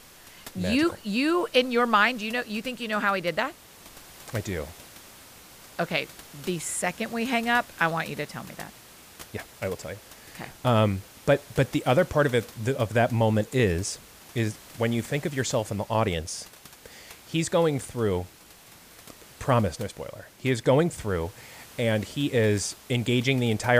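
No technical faults are audible.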